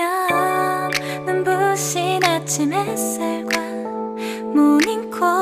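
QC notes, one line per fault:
No faults detected.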